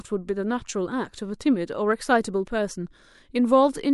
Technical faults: pre-echo

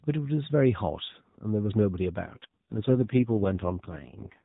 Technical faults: AMR rate drop

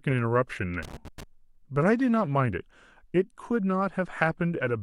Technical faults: loose connector crackle

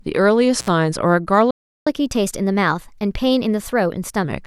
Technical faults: intermittent contact; playback stall; catch-up at higher speed

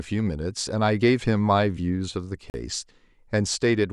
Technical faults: Bluetooth dropout

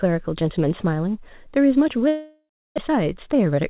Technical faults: long network dropout; jitter buffer speed-up

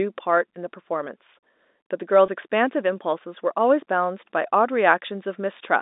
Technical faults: packet loss with pitch repetition

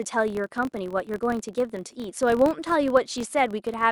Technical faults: filter restarted on every block

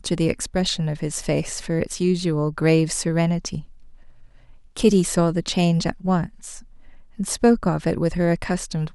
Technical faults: none

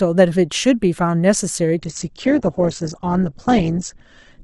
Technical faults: adaptive stream at a lower bitrate

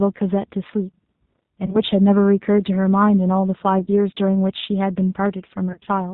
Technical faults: G.729 codec; VoIP packet loss concealed by the speech codec

